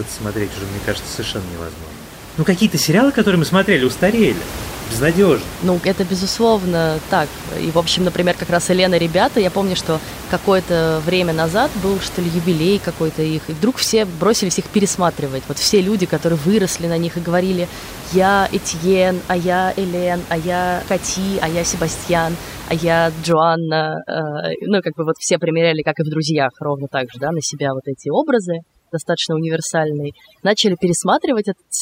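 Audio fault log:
23.32–31.82 s, overdone noise removal: after "а я", the room noise, about 15 dB below the speech, drops to near silence with twinkling specks as bands near the noise estimate are cut. Spectrogram: black background, scattered bright flecks, ragged harmonics.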